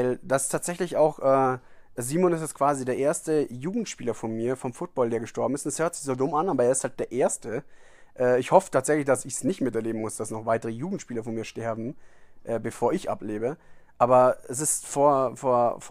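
No technical faults can be heard in this speech recording.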